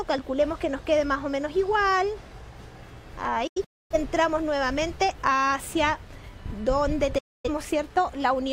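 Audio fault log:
3.47–3.95 s, digital broadcast dropout: the receiver lost good frames and muted, leaving several short holes scattered over about 0.43 s, totalling 0.34 s of silence, the longest 0.26 s. Each edge fades within 8 ms. Unlike network packet-loss concealment, nothing is repeated or smeared, and the sound resumes further along with the missing material gone.
7.18–7.50 s, digital broadcast dropout: a single clean mute of 0.26 s with the same 8 ms fade in and out. This points to a brief run of corrupt frames. Unlike a clip or splice edit, the gap is true silence and the programme picks up later in time rather than where it stopped.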